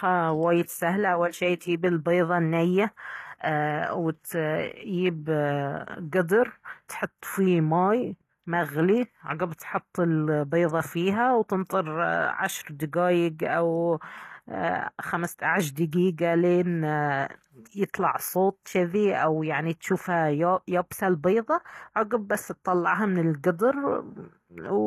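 All the way through the speech there's a steady coarse, gritty edge on the s sounds, and the top end sounds bright but plainly synthetic, with nothing above about 14.9 kHz. That's likely HE-AAC compression at a low rate, something in the region of 24 kbps. Only the lower band is really coded, and the treble is rebuilt by copying lower bands upward, so harmonics don't line up and sibilants come out lispy and metallic.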